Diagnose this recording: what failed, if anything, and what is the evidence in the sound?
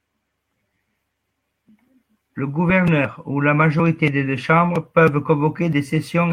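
Nothing in this recording points to a failure at any stage, so there's really nothing to diagnose here.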